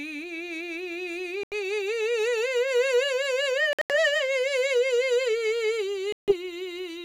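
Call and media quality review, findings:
Likely Bluetooth dropout on the headphone link: late audio packets discarded, output muted until valid packets arrive. Music cuts to silence at 1.43–1.53 s (84 ms lost), 3.73–3.96 s (several short gaps totalling 140 ms over 168 ms, longest 84 ms) and 6.12–6.34 s (154 ms lost). Each time playback resumes further along rather than where it stopped, as if the music kept running through the hole.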